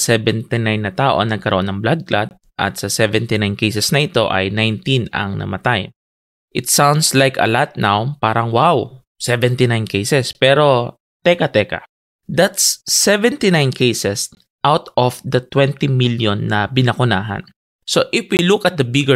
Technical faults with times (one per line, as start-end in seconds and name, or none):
2.29-2.31 gap between chunks
10.33-10.35 gap between chunks
14.35 gap between chunks
18.37-18.39 gap between chunks